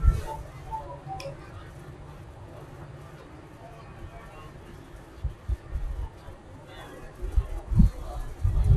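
Speech runs slow and low throughout, from a wrong sample rate. It plays at about two-thirds speed and about seven semitones down, which fits 48 kHz audio played at 32 kHz.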